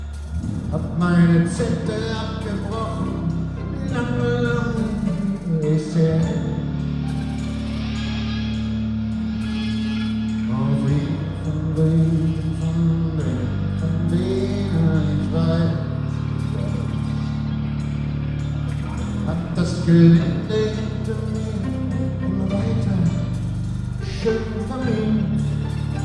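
No technical faults are audible.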